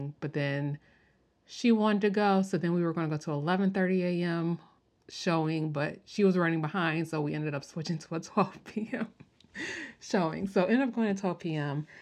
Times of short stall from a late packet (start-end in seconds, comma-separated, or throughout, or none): none